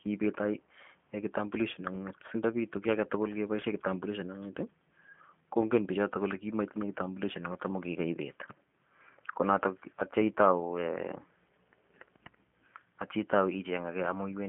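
From start to finish, the speech carries G.729 codec damage. It sounds thin, rough and slightly synthetic, and nothing above 3.6 kHz survives. This fits 8 kbit/s coding.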